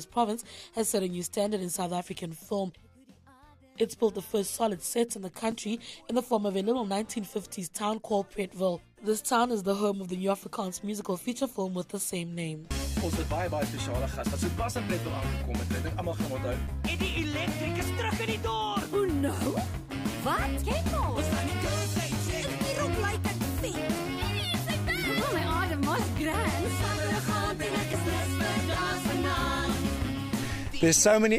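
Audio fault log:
5.52 s, 16.67 s, 26.18 s and 27.93 s: block of digital silence. Each is a sharp tick, a tiny dropout in the sound lasting about 5.8 ms. The signal drops straight to zero and returns with no fade, and a gap this short is heard as a tick rather than silence. Each gap fits a 256-sample buffer that was never filled, which points to the program missing its deadline to deliver output on time.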